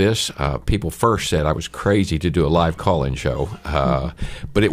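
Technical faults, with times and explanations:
0.20 to 3.76 s, clock drift buffer slips: a brief click recurs every 1.18 s, four times in all. Two devices likely run on separate clocks, roughly 300 ppm apart. Their shared buffer slowly drifts. Then a small block of samples is dropped or repeated.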